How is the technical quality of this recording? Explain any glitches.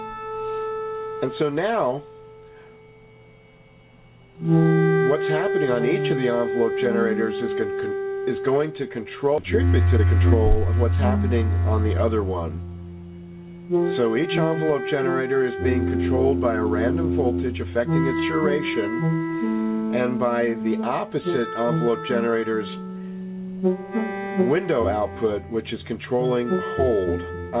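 The recording has three glitches clustered between 9.4 and 12.3 s: an abrupt jump forward followed by two stretches of hurried playback. Throughout, the sound is band-limited with nothing above 4 kHz, which fits a G.711 mu-law telephone codec at 64 kbps.

Skip ahead at 9.38 s: roughly a second of audio was discarded, either lost in transit or dropped when an overfull jitter buffer flushed. Playback jumps straight to later material with no gap or fill, so the two sides meet almost directly.

Jitter buffer speed-up from 9.61 to 10.97 s and again from 11.48 to 12.25 s: after the backlog, the receiver trimmed tiny pitch-period slices repeatedly to shrink its delay. The first pass runs at 113% and removes about 200 ms; the second runs at 106% and removes about 50 ms. Both sound faster and rushed without any pitch change.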